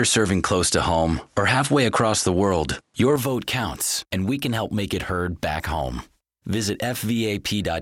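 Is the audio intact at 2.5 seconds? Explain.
No. From the start of the clip to 3.16 s the sound is band-limited, with nothing above 11.4 kHz, so it sounds duller. A faint background noise of its own sits far below the signal. At 3.16 s the level changes by around 5 dB with no gap. This is likely an input switched to a poorer device. A plain low-pass filter would cut the top end alone, without bringing its own noise floor and level shift.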